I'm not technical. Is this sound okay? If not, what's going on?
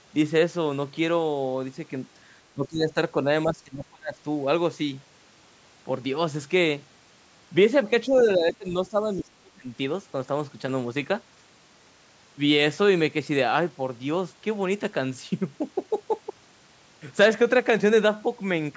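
No. The call's echo canceller likely got confused when both people were talking at once, and it turned down the talker's voice along with the echo it was trying to remove. This is called speech suppressed in double talk. You can hear the voice sink from 2.53 to 2.96 s, more deeply from 3.45 to 4.16 s, and again for about a second and a half from 8.07 to 9.71 s.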